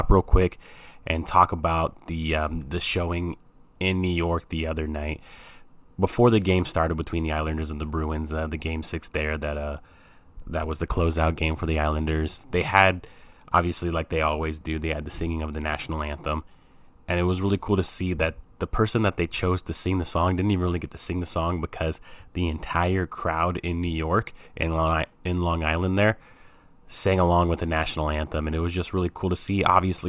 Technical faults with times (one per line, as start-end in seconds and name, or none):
none